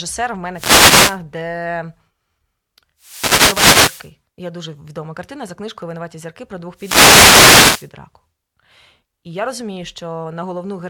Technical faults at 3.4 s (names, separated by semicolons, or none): wireless microphone noise hit